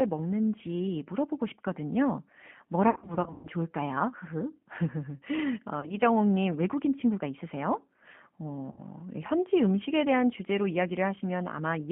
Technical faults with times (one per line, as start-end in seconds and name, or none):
0.00-11.92 G.729 codec
2.90-3.48 VoIP packet loss concealed by the speech codec
5.80-5.94 VoIP packet loss concealed by the speech codec
8.71-8.82 VoIP packet loss concealed by the speech codec